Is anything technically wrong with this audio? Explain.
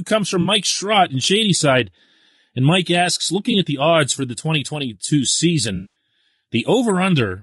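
Yes. Throughout, the speech sounds rough and grainy, with noise filling the gaps between harmonics and a thin, synthetic-sounding top band. This is likely low-delay AAC compression (AAC-ELD) at a bitrate around 32 kbps. Its short frames resolve pitch poorly. On a spectrogram, harmonics look smeared and the upper band looks patchy.

There is also AAC frame loss with concealment: the decoder filled in missing frames by reusing the last good spectrum. It happens at 0.41–0.47 s, just after "comes from", and at 3.51–3.54 s, just before "at the odds for". Each is a brief smeared, phasey patch, consistent with two frames and one frame lost. At 5.75–5.94 s, losses scattered over about 200 ms leave the sound noisy and decaying. A spectrogram shows blurred, static-looking columns, and the waveform shows the envelope sagging there.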